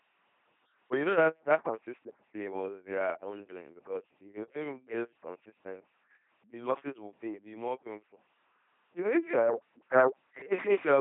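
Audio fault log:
throughout LPC-10 vocoder: heavy damage leaves the speech a buzzing robotic voice, each instant rendered as pulse-train buzz or hiss, which fits a 2.4 kbit/s LPC-10 link. A spectrogram shows rigid, evenly spaced harmonics or flat noise, and nothing above 3.8 kHz.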